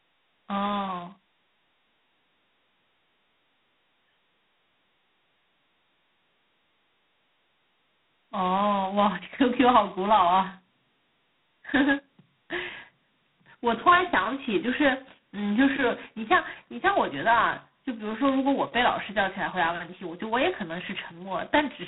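From start to finish the speech is G.726 ADPCM damage, and heavy: each sample carries only a coarse difference from an adaptive prediction, so quantisation noise is large and rides the speech level as a harsh, rasping hiss, which fits the 16 kbit/s rate. The band is telephone-narrow, about 150 Hz to 3.4 kHz. On a spectrogram, energy stops dead near 3.8 kHz, with a grainy noise floor between harmonics that swells and fades with the waveform envelope.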